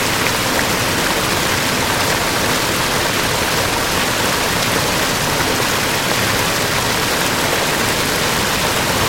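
A doubled audio track runs throughout this recording of sounds: a second full-band copy trails the original by roughly one and a half seconds, around 5 dB quieter and without decay or room colour. It likely comes from a slower second capture path or an edit holding two copies out of step.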